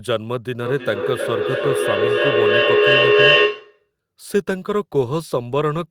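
From 0.62 to 3.92 s the speech has feedback echo between two devices: each phrase returns roughly every third of a second and builds to about 6 dB above the original speech.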